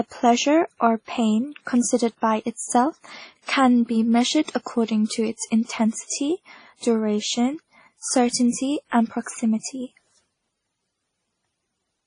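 Throughout, speech carries two layers of codec artefact, not one, with nothing above 10.1 kHz: transcoding between lossy codecs, likely MP3 re-encoded as WMA 1.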